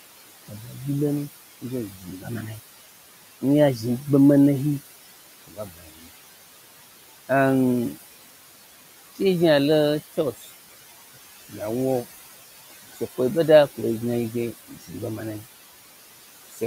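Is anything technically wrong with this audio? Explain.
Yes. Two problems stem from noise suppression on this speech.

Noise suppressor artifacts run throughout. Noise bands are pulled down about 16 dB frame by frame, so the room noise, about 15 dB below speech, pumps.

Speech cut by the noise suppressor occurs at 1.9–2.27 s, 5.48–6.07 s and 10.39–10.49 s. Speech mistaken for noise drops up to about 15 dB. The affected speech sounds swallowed or faint.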